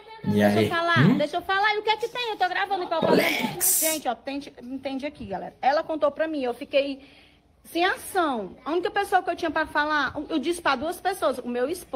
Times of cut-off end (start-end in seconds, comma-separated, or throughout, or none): none